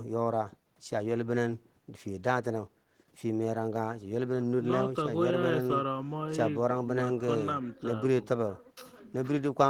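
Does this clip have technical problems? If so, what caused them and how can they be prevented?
No, this clip has no technical problems, so there is nothing to prevent.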